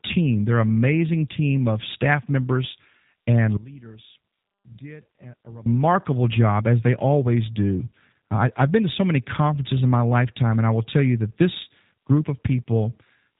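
Speech, heard through the G.729 codec for the whole clip. Nothing passes above 3.8 kHz. Plainly audible rough, synthetic texture fits an 8 kbit/s model-based rebuild.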